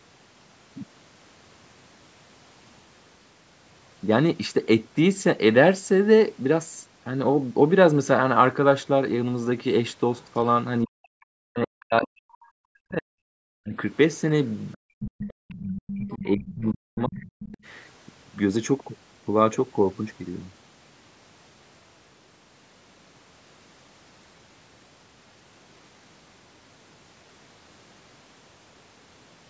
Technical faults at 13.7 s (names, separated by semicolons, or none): speech suppressed in double talk